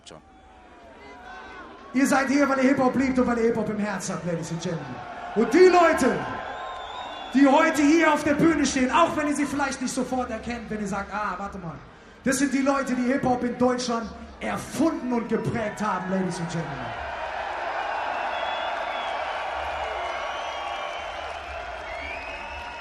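Nothing goes wrong anywhere in the recording, so there's no fault to point to at any moment.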